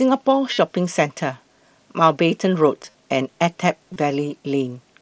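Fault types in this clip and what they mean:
Concealed Bluetooth headset packet loss: headset-to-phone packets went missing and the receiver filled each gap by repeating the best-matching recent stretch of waveform. It is heard as a short buzzy, held tone at about 0.53 s, 2.79–2.95 s and 3.93 s, with a faint warble as real speech resumes. On a waveform, the gaps show as periodic copied cycles at steady level. On a spectrogram, they show as flat harmonic smears within the wideband mSBC path's 8 kHz ceiling.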